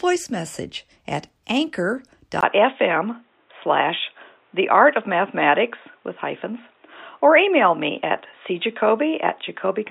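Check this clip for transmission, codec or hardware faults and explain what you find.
One fault is present: an input switched to a poorer device, from 2.41 s to the end. At 2.41 s there is a 20 ms gap, and then the speech turns dull and boxy, most likely because recording moved to a narrower-band microphone or headset path. A spectrogram shows everything above 3.8 kHz suddenly emptied. The waveform changes level by roughly 5 dB, and a new noise floor sits far below the speech.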